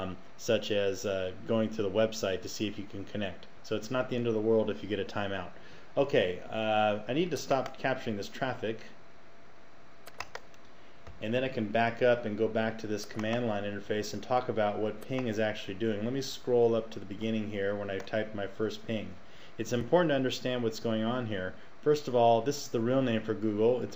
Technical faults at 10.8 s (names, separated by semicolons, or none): none